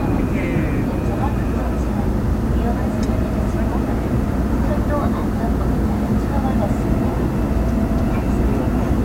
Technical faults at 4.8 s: low bit depth without dither

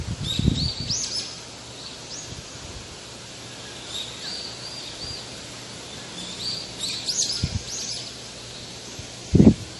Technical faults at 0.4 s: MP3 compression

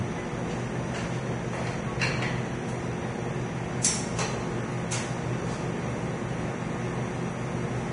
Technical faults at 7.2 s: Vorbis compression

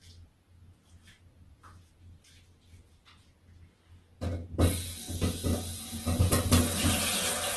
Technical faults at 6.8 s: Opus compression

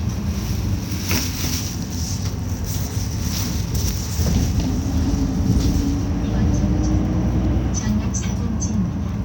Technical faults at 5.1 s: none

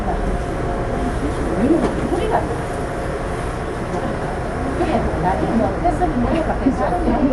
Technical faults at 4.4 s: Dolby Digital compression

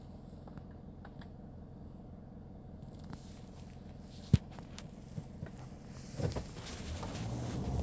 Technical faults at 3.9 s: none

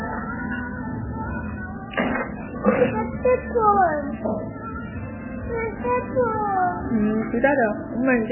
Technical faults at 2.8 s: MP3 compression

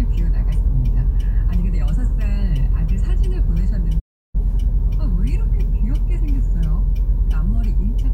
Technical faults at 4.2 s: playback stall

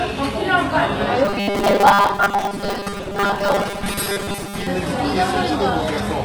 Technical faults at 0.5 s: HE-AAC compression

